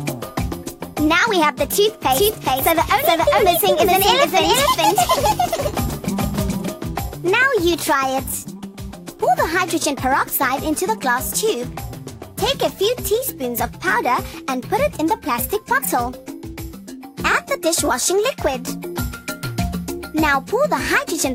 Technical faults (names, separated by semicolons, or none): doubled audio track